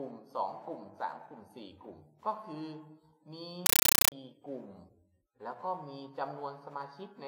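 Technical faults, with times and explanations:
3.66–4.12 s, compressed stream played as audio: the sound is replaced by very loud, chattering static. A Dolby Digital (AC-3) bitstream, most likely arriving over S/PDIF or HDMI, has been treated as ordinary samples instead of being decoded. Each frame plays as an 8 ms burst of noise followed by silent padding, about 31 times a second. On a waveform this shows as dense, loud blocks separated by flat gaps. A spectrogram shows broadband vertical stripes at that rate. The burst-to-gap proportion fits a 384 kbps stream.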